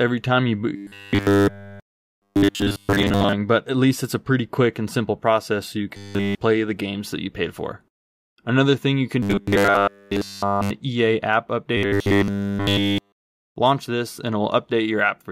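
Robotic sound from repeated short buffers at 0.76–3.33, 5.97–6.36, 9.23–10.71 and 11.77–13.56 s: a rigid 100 Hz buzz, likely from a 10 ms chunk being looped nearly the whole time.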